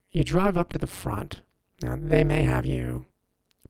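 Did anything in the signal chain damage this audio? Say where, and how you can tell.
Yes. Overlap-add ripple runs through the whole clip, a metallic buzz with extra tones around each note, rippling at around 200 Hz with a depth of about 60 dB. The frame-based processing stage reassembled windowed frames whose overlap doesn't sum to a steady gain, so the level dips once every frame.

Short concealed packet loss appears at 0.71–0.75 s and again at 2.27–2.31 s, each a brief smear where the sound wobbles. On the network path, about 20 ms of audio arrived too late each time. The decoder extended the preceding sound to bridge the gap, then blended back into the real signal.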